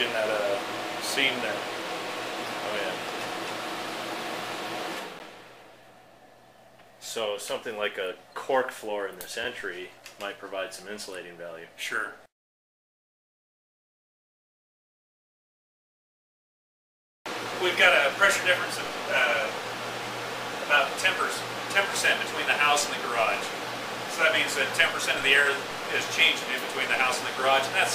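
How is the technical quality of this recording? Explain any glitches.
There is one glitch, at 5.19 s: a single sharp tick, or the briefest dropout, where the sound vanishes for about 10.7 ms and returns abruptly. This is a block of digital silence. A run of samples was output as pure zeros, with no fade in or out, so each edge is a hard step. The length fits a 512-sample buffer, so the likely cause is the program missing its deadline to fill one output buffer in time.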